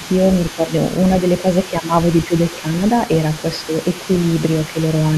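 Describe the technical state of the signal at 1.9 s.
Speech suppressed in double talk runs from 1.71 to 1.92 s. Here the talker's voice dips by around 10 dB in pieces over roughly 150 ms, likely because an echo canceller, hearing both sides at once, could not separate its own talker from the loudspeaker echo and attenuated both.

The other side's voice leaking through is also present at 1.9 s, as it is across the whole clip: a faint second voice sits roughly 20 dB below the speech. It likely comes from loudspeaker playback reaching the microphone and not being fully cancelled.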